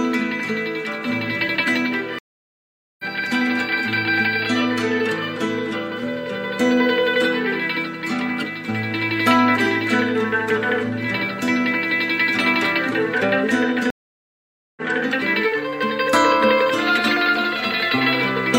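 At 2.19 s the audio drops out for 0.80 s and picks up again at 3.04 s. At 13.90 s a second gap of 0.86 s ends at 14.81 s. Both are stream reconnects: the connection failed, playback went silent, and a new decoder started partway through the live stream. On resumption the audio has jumped ahead, by roughly 0.7 s the first time and about a second the second time, so material is skipped rather than delayed.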